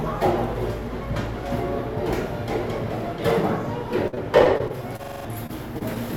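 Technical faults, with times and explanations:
4.07–5.98 s, repeated packet loss (robotic sound): twelve short gaps, longest 52 ms, each patched by extending the preceding sound, giving choppy chunks with pieces missing; the spectrogram shows smeared, frozen slices.
5.04–5.25 s, system hang loop: one 42.67 ms block repeats five times at 23.4 Hz, a stuttering rattle that fits a 2048-sample ring buffer. The waveform shows identical copies back to back, and about a fifth of a second of real sound is lost.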